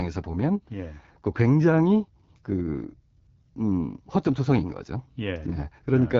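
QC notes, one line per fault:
Throughout: AMR wideband (HD Voice) codec. The speech has a rough, raspy grain and nothing above about 7.2 kHz, which fits AMR-WB at one of its two lowest rates, around 8.85 kbit/s. The vocal tract model and pulse excitation are too coarse at this rate, and the band above 6.4 kHz is filled with shaped noise. Plain narrowband telephone coding would instead cut off near 3.4 kHz and sound muffled rather than hissy-rough on top.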